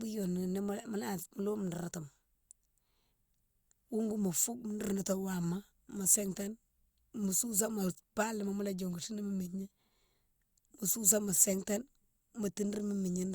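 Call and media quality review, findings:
Nothing stood out on listening to the speech clip.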